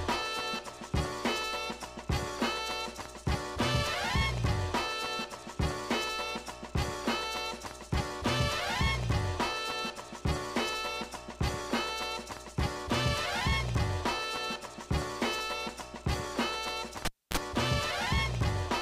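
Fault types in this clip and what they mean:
Cable pulled and plugged in: a pop at 17.05 s, 270 ms of near silence, a 37 ms burst of 60 Hz mains buzz, then another pop as the sound returns at 17.37 s. A live cable was pulled and reinserted, and the buzz came while only its tip touched.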